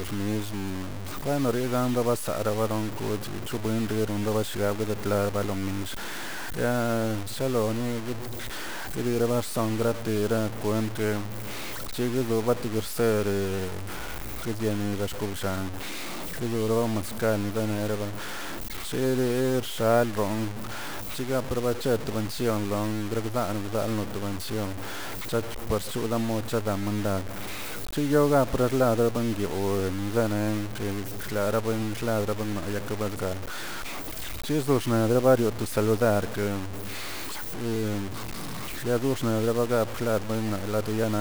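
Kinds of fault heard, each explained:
Low bit depth without dither: Grainy, rasping distortion runs through the whole speech clip. The error sits only about 10 dB below the speech, so the grit is loud. It rises and falls with the voice instead of holding steady like hiss. Quiet passages and word endings break up and sputter, then cut to silence. The likely cause is samples truncated to a very coarse grid with no dither, which fits roughly 5 bits.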